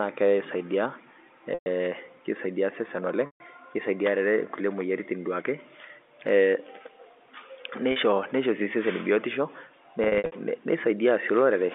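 Packet loss with pitch repetition occurs at 1.54–1.66 s, just before "keisaidia osesen", and again at 3.26–3.40 s, right after it. Each gap of 120 and 140 ms is bridged by a repeated pitch period that buzzes, then fades toward silence. At 7.92 s a 40 ms loss sounds like a brief held buzz. From 10.04 to 10.32 s, 200 ms of losses in runs up to 60 ms cause repeated short buzzes. Unlike plain dropouts, the gaps begin with a buzz rather than going dead at once.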